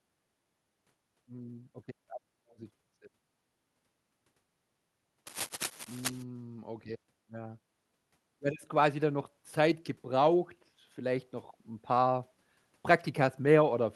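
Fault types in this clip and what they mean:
cable scratch noise: From 5.27 to 6.23 s, a dense, uneven scratching and crackling sits over the speech, only a little quieter than the voice itself. It is likely caused by a worn cable or connector being moved, so its contact resistance jumps erratically. On a spectrogram it appears as ragged broadband vertical streaks across the speech harmonics. In the waveform, jagged irregular spikes ride on the signal for just under a second.
automatic gain rising: Between 8.4 and 11.33 s, the automatic gain control treats the input as too quiet and raises its gain by about 4 dB. Speech and background noise swell together, so the room floor creeps up in step with the voice. In the waveform, the envelope widens gradually over roughly three seconds. On a spectrogram, everything brightens evenly across all frequencies, including the noise floor between phrases.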